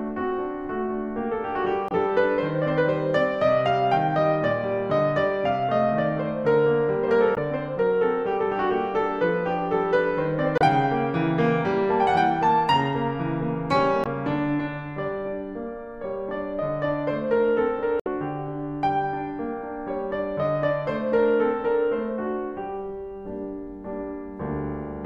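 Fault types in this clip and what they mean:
Damaged data in a compressed stream: five brief glitches in the music, each about 45 to 70 ms, where corrupted frames make the decoder lose sync.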